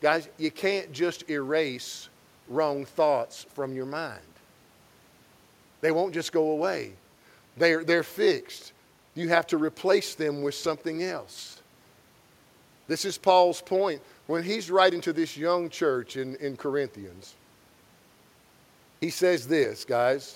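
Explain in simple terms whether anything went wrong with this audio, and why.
Nothing went wrong here; the recording has no faults.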